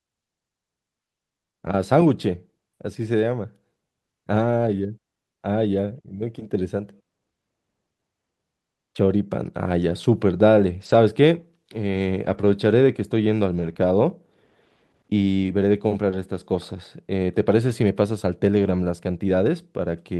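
Lost packets rebuilt from error correction appear at 1.65 to 1.67, 9.89 to 9.91, 10.81 to 10.95, 12.25 to 12.47, 13.57 to 13.71, 15.71 to 15.73 and 17.69 to 17.71 s. Each stretch is rebuilt from a low-bitrate copy carried in the following packet, so nothing drops out, but the sound turns rougher and noisier. The short ones last 20 ms. The longer runs last 80, 120 and 80 ms. Unlike concealment, the speech still follows its real course.

Right after, at 13.73 to 13.77 s, comes a short concealed packet loss. Here no copy existed, so the decoder extended the preceding sound to bridge a gap of about 20 ms and then blended back in. The result is a brief smear or wobble, guessed rather than rebuilt.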